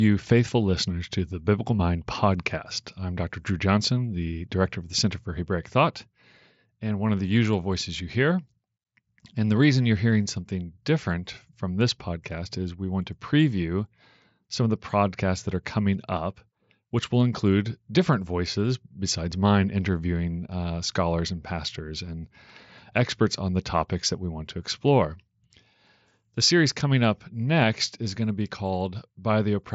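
Nothing here counts as a fault: the speech comes over a Bluetooth mSBC headset link, so the top end runs out at about 7.7 kHz, which is simply how that wideband headset codec sounds.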